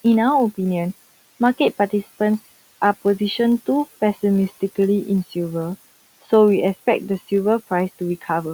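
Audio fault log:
Throughout, filter restarted on every block: a steady 50 Hz buzz rides on the speech, which points to blocks about 20 ms long. The filter loses its memory at each block edge and begins again from silence. That leaves a small transient at the start of every block. Fifty such ticks a second fuse into a buzz. It grows louder with the speech and fades in pauses, where the room noise, about 23 dB below the speech, remains.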